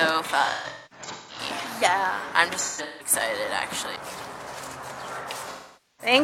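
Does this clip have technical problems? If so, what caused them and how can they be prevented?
Yes. AAC frame loss with concealment occurs at 0.44–1.40 s, 2.59–3.13 s and 5.45–6.13 s. The decoder rebuilt missing frames from the last good spectrum, giving smeared, phasey patches, with runs of up to about 200 ms in the first two. These show as blurred, flattened bands on a spectrogram. Forward error correction or retransmission on the stream would prevent it.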